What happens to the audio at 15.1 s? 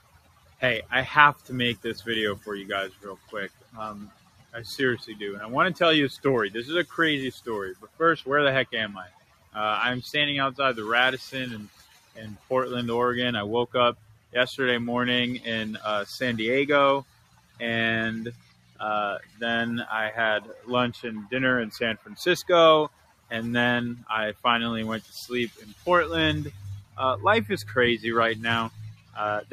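At 15.1 s, as throughout the clip, sustained parts and decaying tails sink by around 15 dB while attacks push through, so the sound pumps and thins. A noise suppressor built for speech is treating steady tones and reverb as noise and pulling them down.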